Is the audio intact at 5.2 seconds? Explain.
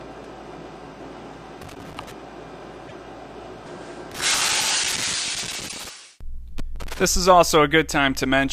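No. At 5.2 seconds the audio sits inside a burst of loose connector crackle running from about 4.12 to 5.89 s. A worn or dirty contact in the signal path is making and breaking as it shifts, so the signal is repeatedly interrupted, and any DC present on the line turns each break into a pop. The result is an irregular, scratchy crackle laid over the sound for nearly two seconds.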